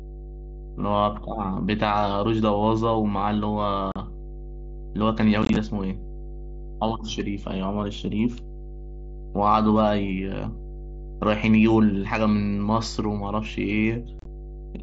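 Mains hum at 50 Hz runs through the whole clip, a steady low tone roughly 15 dB below the speech, where a ground loop or nearby transformer has leaked power-line current into the signal. Unconcealed Bluetooth headset packet loss then punches abrupt holes at 3.92 to 3.96 s, as scattered chopped gaps from 5.43 to 5.56 s, and from 14.19 to 14.26 s. Lost voice packets were replaced by silence or an idle pattern inside the 8 kHz wideband headset link, which fits mSBC.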